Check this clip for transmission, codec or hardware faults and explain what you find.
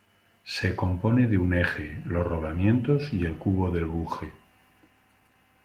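No faults turn up in this speech clip. The Opus voice compression is working as intended at 20 kbps in hybrid mode, keeping the full audio band, and leaves only a light mark on the speech.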